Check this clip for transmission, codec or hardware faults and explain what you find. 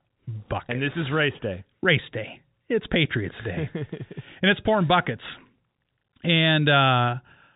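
Nothing stood out on listening to this speech, which comes through the G.711 telephone coding with its usual narrow band and no content above about 3.9 kHz.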